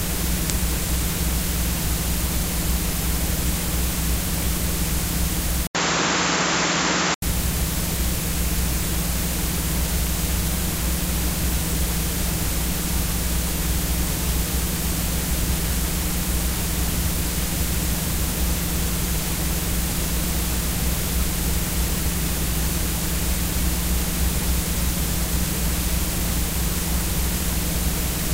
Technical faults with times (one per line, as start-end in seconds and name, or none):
5.67-7.22 input switched to a poorer device